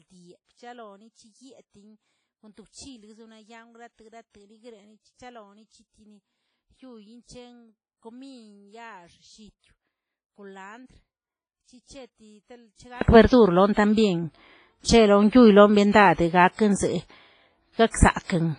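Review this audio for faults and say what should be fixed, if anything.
From 0.0 to 13.01 s the speech sits about 32 dB below its normal level. It returns at full level after that. The likely cause is one channel inverted: common content cancels when the stereo pair is summed to mono. Check polarity on both channels before any mono fold-down.

The whole clip is smeared and watery, with hiss that rises and falls with the speech. Nothing remains above 10.4 kHz. This is heavy damage, likely from WMA compression at a low bitrate around 24 kbps. Encode at a higher bitrate or use a modern codec.

At 16.53 s a short hiss of about 57 ms comes just before a sharp attack. This is pre-echo. Quantisation noise sized for the loud onset spreads back across the quiet start of the transform block. Use an encoder with block switching for transients.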